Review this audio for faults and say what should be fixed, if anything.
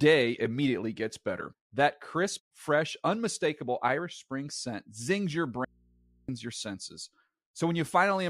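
An audio dropout to a faint residue runs from 5.65 s to 6.29 s, right after "scent zings your" and before "your senses". The speech cuts out abruptly for about 0.64 s. Only mains hum fills the gap, roughly 35 dB below the speech. The likely cause is a brief loss of signal upstream while the input stayed open and picked up hum. To prevent it, secure cables and connectors and monitor the input during recording.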